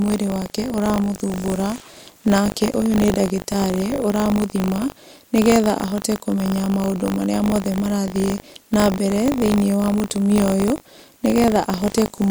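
Speech with buffer tearing throughout: a steady robotic rattle at 50 Hz, the buffer rate, where writer and reader cross in each 20 ms period and splice in a small slice of audio about 40 ms old. Unlike mains hum, the buzz vanishes in pauses.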